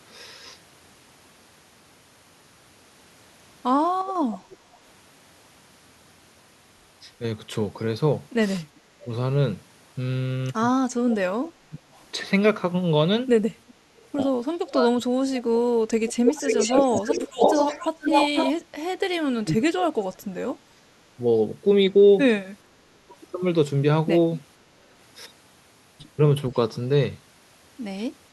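From 4.06 to 4.78 s, a faint delayed copy of the speech trails it by 349 ms, roughly 20 dB down. This is an echo leak, likely from a far-end loudspeaker whose echo canceller let some of its pickup through. On a spectrogram it shows as a weak duplicate of the speech harmonics shifted right by about a third of a second.

From 10.95 to 11.92 s, the talker's speech is suppressed in double talk. For roughly 0.4 s in total it dips by up to about 30 dB, likely because the canceller could not separate the talker from the returning echo. The waveform shows the speech envelope collapsing in pieces.

Overlapping that, from 11.1 to 11.97 s, the echo leak returns at about 15 dB below the speech. Its delay is still 349 ms.

From 13.69 to 18.63 s the echo leak is at its worst. The delayed copy is as loud as the original, so the spectrogram shows two equal overlapping harmonic stacks. Inside it, from 14.53 to 17.43 s, the double-talk suppression chops about 1.5 s of the speech, with dips of around 25 dB.

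Further double-talk suppression follows. From 19.27 to 20.38 s, about 1 s of speech is pulled down by up to around 30 dB.

From 20.71 to 20.87 s, the background is gated by the echo canceller. The room sound dips by about 11 dB for 150 ms, which shows as a brief notch in the noise floor before it recovers.

From 22.74 to 23.14 s, about 0.3 s of speech drops by up to around 30 dB in a final double-talk suppression.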